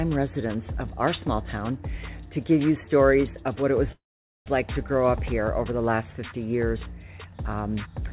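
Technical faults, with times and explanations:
3.92 to 4.48 s, call audio freeze: the last sound trails off briefly into about 0.45 s of silence, then resumes exactly where it stopped, nothing lost. Likely delayed packets emptied the jitter buffer, inserting a 0.54 s gap, heard through the 4 kHz-limited call band.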